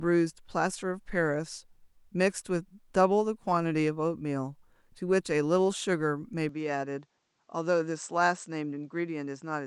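At 6.49 s the speech abruptly loses its top end, with nothing above 8.3 kHz, drops roughly 5 dB and picks up a faint new noise floor, with no gap at the change, through to the end. That's likely the input switched to a poorer device mid-recording.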